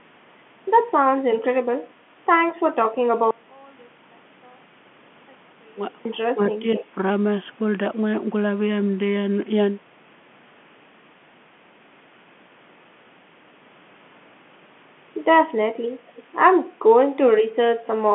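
From 3.31 to 6.05 s, one stereo channel was likely inverted in polarity, so when the two channels are combined, the shared speech cancels itself. The voice drops by about 32 dB and leaves only a faint residue of the difference between the sides.

From 6.32 to 6.77 s, the echo canceller likely met double talk. It could not tell the near talker from loudspeaker echo and suppressed both. For roughly 400 ms the speech dips by as much as 15 dB.

Right after, from 6.76 to 6.85 s, there is an echo leak. Residual loudspeaker pickup was sent back, likely because the echo canceller failed to remove it, and it is heard as a brief copy of the voice 240 ms late, about 15 dB below the speech. The same leak returns from 16.16 to 16.23 s, again delayed 240 ms but fainter, around 25 dB down. Both are heard through the telephone band, which stops near 3.8 kHz.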